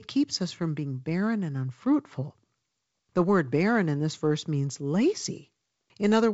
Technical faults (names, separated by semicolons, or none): none